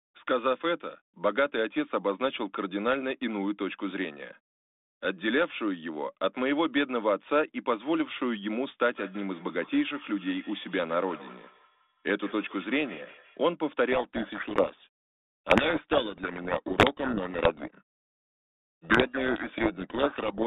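From 8.84 to 13.42 s, feedback echo between two devices: the speech returns roughly every 150 ms, about 20 dB down, thin and ringing, visible as faint repeated copies trailing each syllable. From 13.92 to 20.45 s, a codec payload misread: the G.726 code words arrive in the wrong bit order, burying the band-limited speech in harsh distortion that shows as dense smear across the telephone band of the spectrogram.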